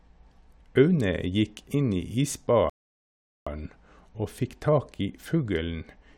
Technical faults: rebuffering stall

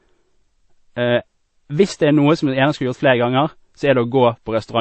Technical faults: transcoding between lossy codecs

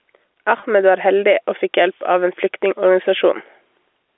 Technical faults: gain pumping; packet loss with pitch repetition

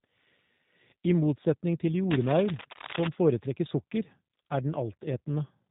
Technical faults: G.729 codec; cable scratch noise

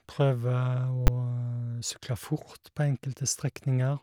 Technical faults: invalid numbers at full scale

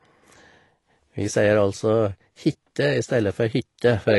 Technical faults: AAC compression

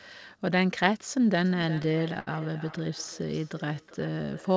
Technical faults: feedback echo between two devices; repeated stalls (stutter)

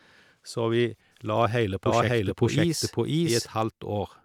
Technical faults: doubled audio track

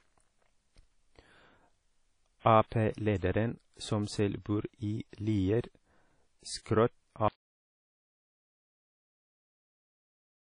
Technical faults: WMA compression; pre-echo; audio dropout to silence

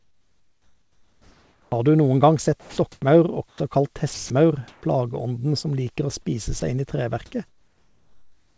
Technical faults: comfort noise in place of the background; onset clipped by the voice detector; sound chopped by the voice detector; sound dropped by the voice detector

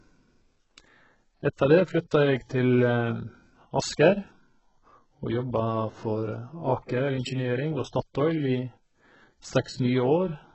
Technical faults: HE-AAC compression

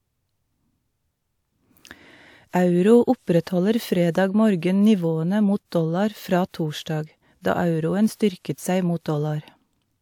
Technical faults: pre-echo

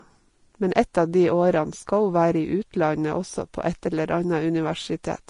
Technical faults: Vorbis compression

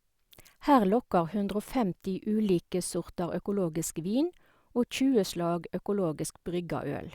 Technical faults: none

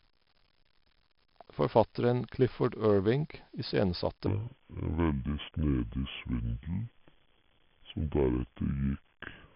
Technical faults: 4-bit ADPCM compression; section at the wrong speed

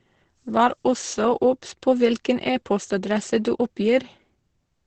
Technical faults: Opus compression

